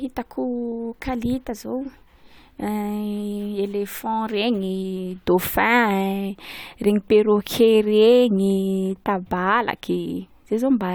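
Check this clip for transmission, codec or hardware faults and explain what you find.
Listening closely to the speech, nothing stood out as a transmission, codec or hardware problem.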